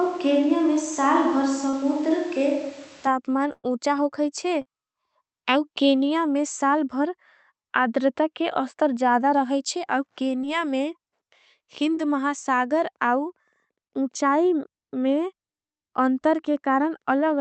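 From the start until 3.07 s the speech sounds roomy and hollow with thinner bass, likely a switch to a distant microphone; level holds steady but room noise sits about 25 dB below the speech. Short concealed packet loss appears at 1.69, 4.62, 10.41 and 11.95 s, where 20 to 40 ms never arrived and was patched by extending the previous sound, leaving brief smears or wobbles. From 3.53 to 3.66 s a burst of packet loss removes about 100 ms; the filled sound fades, drops to silence for about 30 ms, and resumes further on. Throughout, the call path's Opus coding limits the top end to 8 kHz.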